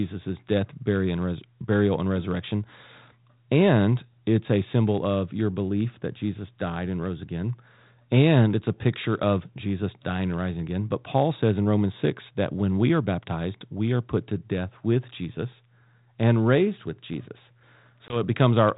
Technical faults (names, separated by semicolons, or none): packet loss on an ADPCM call